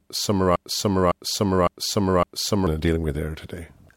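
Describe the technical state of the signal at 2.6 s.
At 2.6 s the speech is still caught in a broken-record loop: from 0.56 s to 2.67 s, one fragment of about 0.56 s plays four times back to back. This is likely a stalled player or stream resending its last buffered piece, and the speech that belonged in that span is lost.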